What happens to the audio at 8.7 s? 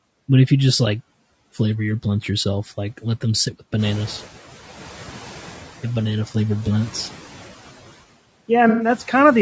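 AAC frame loss with concealment hits from 8.69 to 8.89 s, about 0.2 s. Several consecutive AAC frames never arrived, and the decoder covered the hole by rebuilding sound from the last good spectrum, scrambling its signs or interpolating its energy rather than leaving silence. The result is a brief smeared, noisy patch where the speech loses its clear structure before normal decoding resumes.

Underneath that moment, as across the whole clip, the speech carries plainly audible coding damage: a rough, grainy texture with noise creeping between the harmonics and a thin, synthetic-sounding top band. This is likely low-delay AAC compression (AAC-ELD), whose short frames resolve pitch harmonics poorly, and the degree of damage fits a low bitrate of around 32 kbps.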